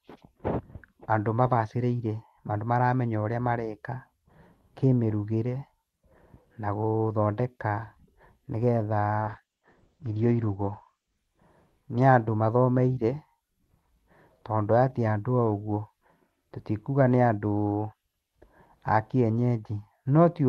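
Speech over an Opus call path shows a call bitrate drop from 9.25 to 12.25 s. The audio turns rough and muffled as the top end falls from 12 kHz to 8 kHz, bottoming out for about 1.7 s. This fits the encoder's rate being cut from roughly 32 to 11 kbps before recovering.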